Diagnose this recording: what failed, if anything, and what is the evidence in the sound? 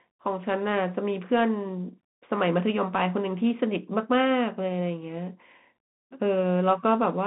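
Narrow, boxy speech limited to roughly 150 Hz to 3.6 kHz for the whole clip, with a granular hiss under it, scratchy s sounds and loud peaks breaking up. This is a Bluetooth CVSD headset codec at the codec stage, consistent with a 64 kbit/s stream whose one-bit up-down steps can't keep pace with loud, fast-changing sound.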